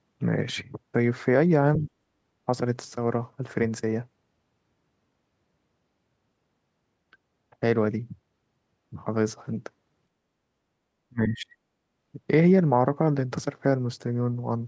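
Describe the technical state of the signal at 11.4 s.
At 11.4 s the speech drops sharply, by around 30 dB, between 11.09 and 11.55 s. This is likely speech suppressed in double talk, with the echo canceller turning down the near talker during overlap.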